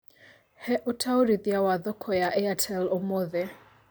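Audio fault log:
No audible faults found.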